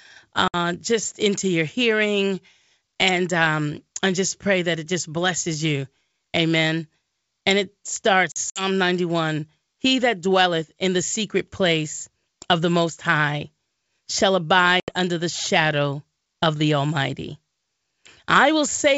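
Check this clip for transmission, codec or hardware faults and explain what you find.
The speech has packet loss on an ADPCM call, at 0.48 to 0.55 s (60 ms lost), 8.32 to 8.63 s (100 ms scattered, longest gap 60 ms), and 14.80 to 14.92 s (80 ms), each a few packets. Silence fills the holes, and the decoder's predictor and step size drift from the sender's, so speech resumes slightly distorted after each abrupt gap before recovering.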